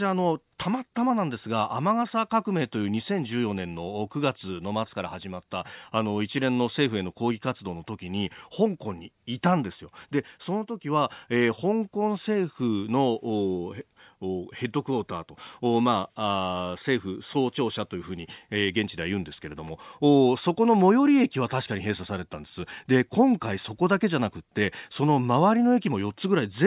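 No technical faults can be heard in this speech recording.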